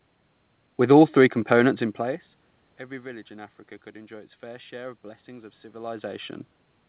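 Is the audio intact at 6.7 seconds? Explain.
Yes, the audio is intact at 6.7 seconds, with no fault at that moment.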